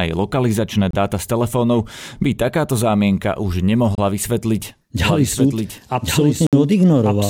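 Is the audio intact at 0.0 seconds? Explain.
Yes, at 0.0 seconds the audio is intact, with no dropout, click, distortion or other fault audible at that moment.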